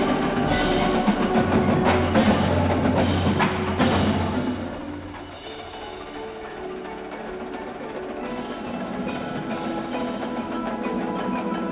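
No technical faults can be heard anywhere in the recording, and the signal stays steady and intact for its whole duration.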